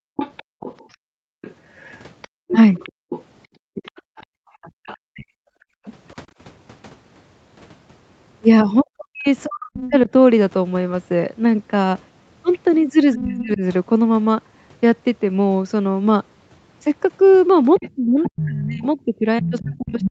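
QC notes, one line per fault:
0.00–6.37 s, background gated by the echo canceller: while the loudspeaker plays, the canceller pulls the microphone down hard, so the room sound dips by up to about 36 dB, roughly two seconds in total, and returns whenever the suppression releases.
0.16–5.93 s, 9.82–9.94 s, 13.39–13.53 s, 17.74–20.11 s, other side's voice leaking through: a second voice sits roughly 10 to 20 dB under the talker, likely loudspeaker echo the canceller failed to subtract from the microphone signal.
5.03–5.35 s, 8.83–10.10 s, 13.15–13.62 s, 17.96–20.11 s, speech suppressed in double talk: the talker's voice dips or breaks up, by about 40 dB at worst and around 15 dB at 13.15 s, likely because overlapping far-end speech made the canceller attenuate both sides.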